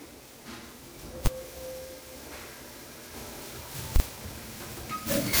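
Generation loss, throughout: the sound is swirly, smeared and hollow, with blurred attacks, likely from repeated lossy re-encoding, around ten passes, fitting MP3 at 128 kbit/s.

Invalid numbers at full scale, at 1.26 s and from 3.96 to 4.00 s: invalid values were pinned to maximum output, giving one bang first, then two loud pops around a 40 ms gap.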